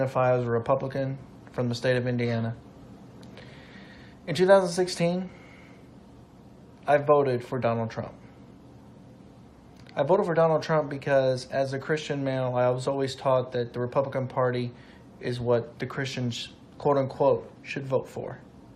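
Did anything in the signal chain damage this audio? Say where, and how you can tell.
No, nothing in the signal chain damaged this audio.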